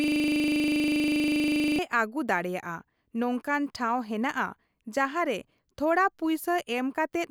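Speech opens on a 25 Hz buzz from 0.0 to 1.79 s, already under way at the start. This is a system hang loop, with a 40 ms ring-buffer slice repeating while the system froze.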